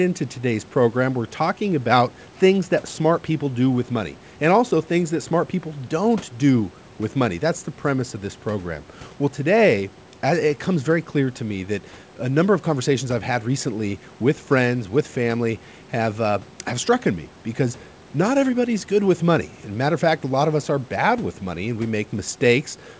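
No technical faults can be heard in this speech. The sound stops short of 8 kHz, as expected of a call's microphone path feeding G.722 wideband telephone coding, and any coding trace is faint at most, which fits the full 64 kbit/s mode.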